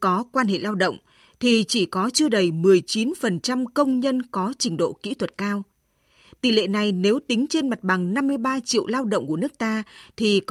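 Speech with clock drift between sender and receiver: the sender's clock runs roughly 1.5 percent slow, starving the receiver's buffer, unlike random packet loss, which leaves gaps without a steady bias. Repeated timing corrections run from 0.30 to 9.71 s, where short repeated slivers stretch playback to 98 percent speed and add about 150 ms, heard as faint uneven hiccups rather than a smooth slowdown.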